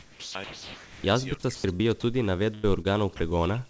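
Sound dropped by the voice detector, at 0.00–0.35 s, 0.44–1.04 s, 1.55–1.64 s, 2.00–2.03 s and 3.17–3.20 s, cuts this speech clip to steady comfort noise, most likely because the sender's detector took quiet speech for background, losing up to a quarter-second of real sound each time. Speech suppressed in double talk runs from 1.36 s to the end: the voice dips by as much as about 40 dB, likely because an echo canceller, confused by both sides talking, turned the near talker down. Short concealed packet loss at 1.76–1.82 s and 2.81–2.95 s leaves brief smears where about 30 ms of audio went missing and the receiver stretched the preceding sound to bridge each gap. A burst of packet loss at 2.54–2.66 s removes about 90 ms, heard as a held, fading continuation before the audio resumes further on. The whole clip is band-limited at 8 kHz by the G.722 call codec.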